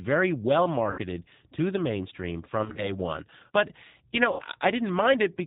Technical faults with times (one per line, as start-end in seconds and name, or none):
0.00-5.47 G.729 codec
0.91-1.00 VoIP packet loss concealed by the speech codec
2.64-2.90 VoIP packet loss concealed by the speech codec
4.32-4.44 VoIP packet loss concealed by the speech codec